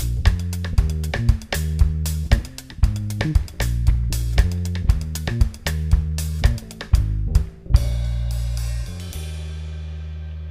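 Nothing in the audio registers as a technical fault.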